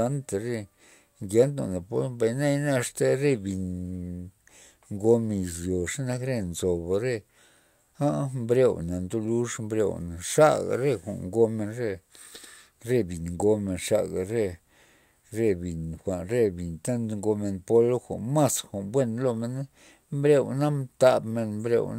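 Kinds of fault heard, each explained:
No technical faults heard.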